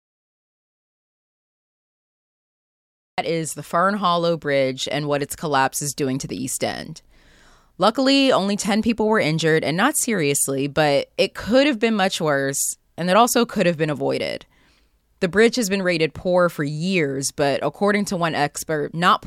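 An audio dropout to silence runs from the very start of the speech to 3.18 s, already under way when the clip begins. The first 3.2 seconds are pure silence, with no room tone or noise floor at all, and the speech then arrives abruptly in mid-flow at "is the". The likely cause is an input that was briefly lost, through a disconnected device, a failed link or a mute, while recording continued, so whatever was said before that point is gone.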